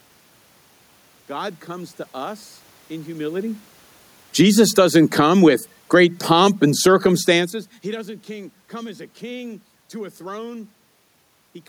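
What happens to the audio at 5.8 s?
At 5.8 s the audio is in the middle of an automatic gain falling episode, running from about 4.25 s to 7.76 s. The gain control judged the input too loud, or its background noise too strong, and pulled its gain down, by about 8 dB over that span. The speech starts loud and then sinks, with the room noise sinking alongside it. The level change around 7 s is the talker shifting position, not the gain control.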